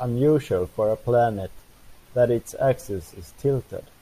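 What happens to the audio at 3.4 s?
Nothing goes wrong at 3.4 s; the speech there plays through intact, with no dropout, click, distortion or other fault.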